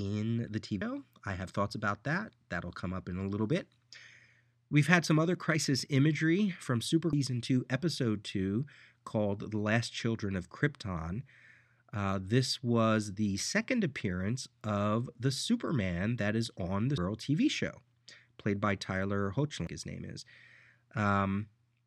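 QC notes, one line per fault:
0.82 s, 7.13 s, 16.98 s, 19.67 s: compressed frames skipped. The sound jumps ahead with no silent gap, losing about 0.3 s at the first two points, about 0.4 s at the third and about 0.5 s at the fourth. This fits whole frames of about 93 ms going unplayed.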